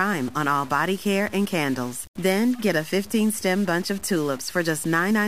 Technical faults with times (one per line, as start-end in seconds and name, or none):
0.00-5.28 stuck bit